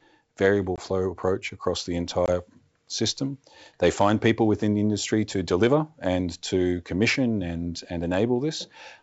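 Packet loss on an ADPCM call opens hard-edged silent holes at 0.76–0.81 s, just before "approach across the", and at 2.26–2.30 s, right after it. Each fits a single lost 20 ms packet. The decoder's predictor and step size then resume out of step, briefly distorting the returning speech.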